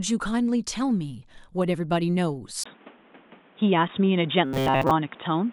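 At 2.64 s the speech drops out for a 20 ms gap, then returns sounding dull and boxy until the end. This is most likely the input switched to a poorer device. On a spectrogram the upper frequencies vanish from that point. The waveform shifts in level by roughly 5 dB, and a new noise floor sits roughly 30 dB below the speech, visible as a faint haze between syllables.

From 4.46 to 4.91 s, inside that degraded stretch, the speech turns into a rigid metallic buzz pitched at 133 Hz. This is robotic sound from repeated short buffers, likely because audio arrived too slowly and a fragment of about 7.5 ms was looped to fill the gap, so most of the real signal in that half-second is skipped. A spectrogram shows flat, evenly spaced harmonics at multiples of 133 Hz. The waveform shows one short shape repeated over and over.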